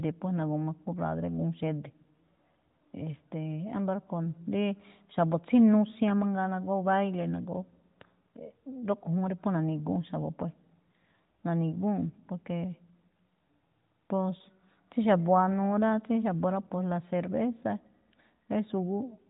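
No technical faults are audible.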